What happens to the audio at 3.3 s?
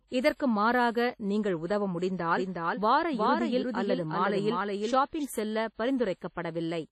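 The speech is repeated, with a second copy about 5 dB quieter trailing roughly 400 ms behind from 2.37 to 5.25 s, abruptly and with no room colour, likely a doubled audio track. Throughout, there is heavy ringing, washy smearing and breathing hiss with nothing above 14.7 kHz, likely WMA compression at 32 kbps.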